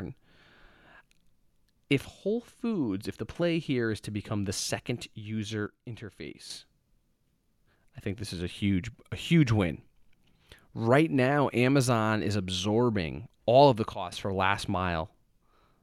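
Gain likely switched abruptly without a ramp, a sudden gain jump dropping the speech and background noise together by about 8 dB from 5.67 to 6.50 s and about 9 dB from 13.93 to 14.12 s.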